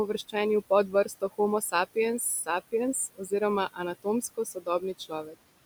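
A speech recording with room noise sitting about 18 dB under the talker, and the whole clip carries noise suppressor artifacts. The suppressor pulls the steady background down by about 19 dB, deciding band by band and frame by frame, so the noise drops away in the gaps and swells back under the voice. There's also speech cut by the noise suppressor in four spots, where it mistook quieter parts of the voice for noise and ducked them along with the background. That happens from 0.88 to 1.39 s (about 17 dB down at worst, roughly a fifth of a second affected), 2.19 to 2.49 s (about 12 dB), 3.14 to 3.41 s (about 21 dB, the deepest), and 4.22 to 5.35 s (about 17 dB, roughly 0.4 s in total). In each stretch, the affected speech comes across swallowed or faint.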